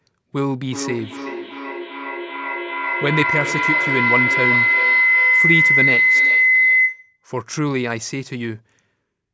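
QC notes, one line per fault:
0.51 to 7.25 s, feedback howl: two devices on one call share a room, so each trip from loudspeaker back into the mic comes back louder. It narrows to a tone near 2 kHz, pulsing roughly every 0.4 s, and peaks about 5 dB above the speech.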